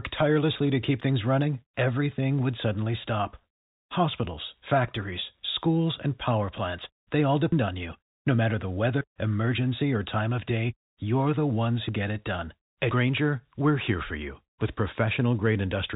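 Between 0.64 and 0.68 s, just before "to keep things running", bit errors on a digital phone line flip a small fraction of the G.711 mu-law samples, each error changing a single sample under the speech. At 7.52, 9.01, 11.89 and 12.91 s, the program likely failed to collect its samples in time, a dropped buffer (overrun), so each spot jumps ahead with no silence. About a fifth of a second is lost at 7.52 s and about a tenth at each of the others: between "matter the" and "emergency or time of", and between "day you're the ones" and "get it done".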